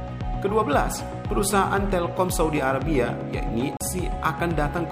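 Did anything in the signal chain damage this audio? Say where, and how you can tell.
Yes: a CD skip at playback, where the laser jumped to another turn of the spiral, muting for about 40 ms at 3.77–3.81 s before resuming elsewhere.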